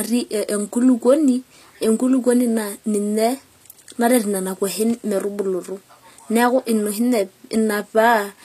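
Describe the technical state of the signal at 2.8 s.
At 2.8 s you're hearing the same HE-AAC compression damage that runs through the whole speech clip, and it's plainly audible. The treble is likely rebuilt by spectral band replication, with lower bands copied upward and roughly shaped, so s sounds come out gritty and metallic rather than clean. Nothing is left above about 14.9 kHz, and this fits a low bitrate around 24 kbps.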